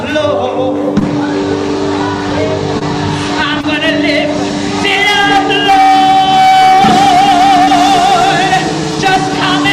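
Short concealed packet loss at 0.99, 2.79, 3.61 and 7.65 s: each 20 ms gap was filled by extending the preceding sound, heard as a brief smear, with smoothed, repeated-looking spectrogram frames.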